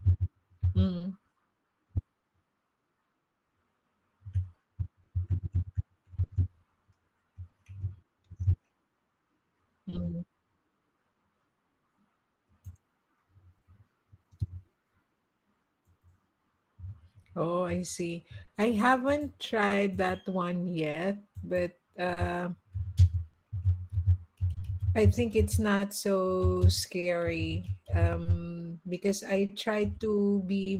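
Small timing hiccups recur unevenly through the whole speech clip. This is clock drift between sender and receiver: the sender runs about 3% slow, so the receiver repeats pieces as its buffer drains.

From 0.97 s to 30.69 s, around thirty brief ticks and smears appear, none longer than about 30 ms. These are scattered short gaps, where lost or late packets were patched by continuing the last sound.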